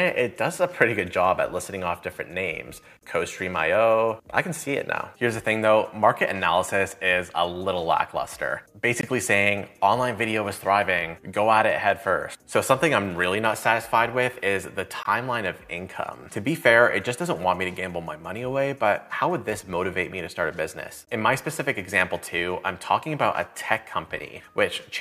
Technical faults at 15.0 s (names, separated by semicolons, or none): gap between chunks